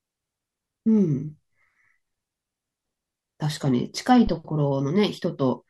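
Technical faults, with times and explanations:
4.27 to 4.35 s, phantom power thump: a supply change on the live input steps through the coupling capacitors. A deep thump peaks at about −17 dBFS, decaying in 16 ms.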